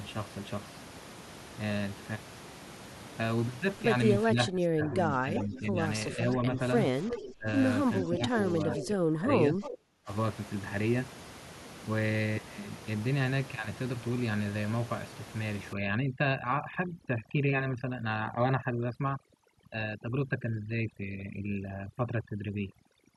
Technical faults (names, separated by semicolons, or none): speech suppressed in double talk; echo leak; overdone noise removal